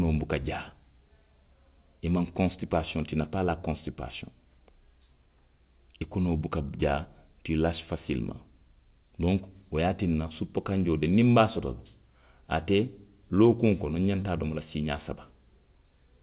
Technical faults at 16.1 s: none

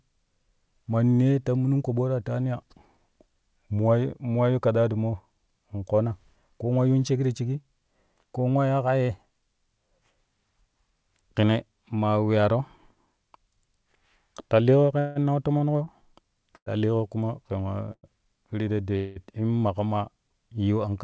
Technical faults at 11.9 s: none

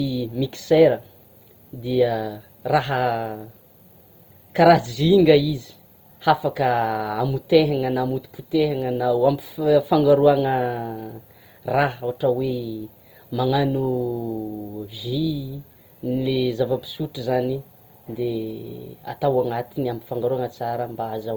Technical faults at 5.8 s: Opus compression

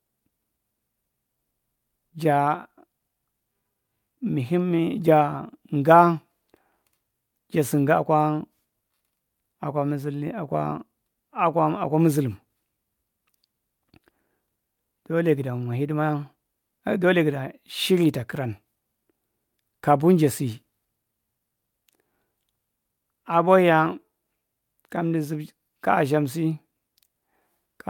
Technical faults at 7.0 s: none

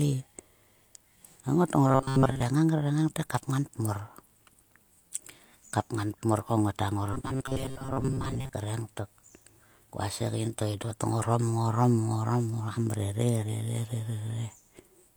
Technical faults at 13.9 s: none

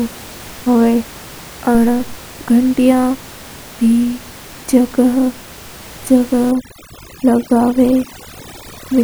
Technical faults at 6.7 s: overdone noise removal

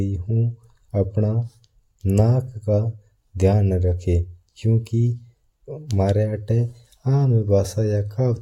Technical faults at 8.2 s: none

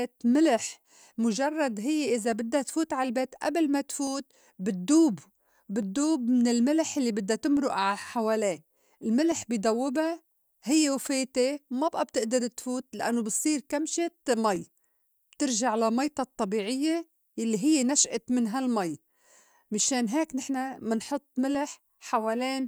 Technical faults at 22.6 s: none

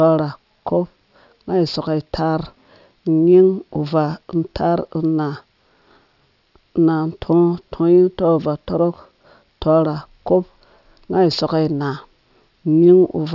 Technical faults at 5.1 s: aliasing

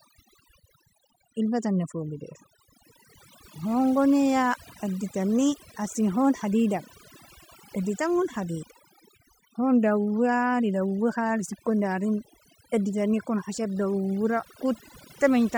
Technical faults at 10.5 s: overdone noise removal

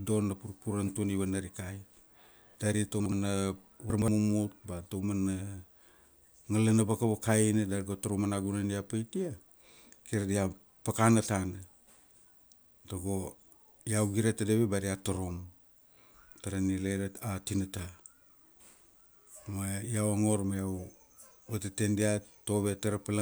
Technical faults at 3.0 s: chunks out of order

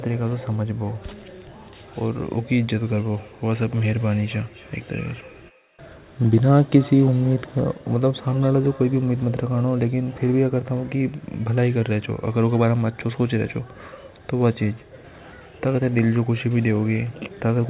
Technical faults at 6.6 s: feedback echo between two devices

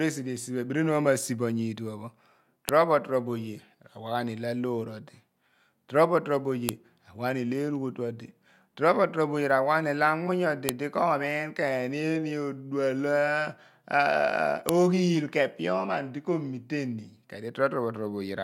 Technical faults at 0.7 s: none

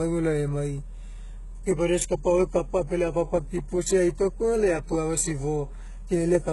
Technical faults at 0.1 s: HE-AAC compression

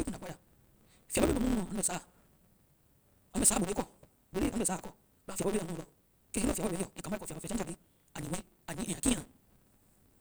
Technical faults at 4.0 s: block size mismatch (truncated)

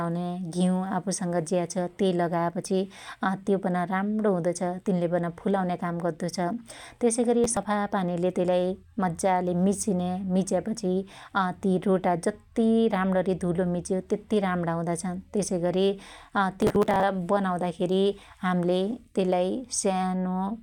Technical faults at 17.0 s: processor overload crackle

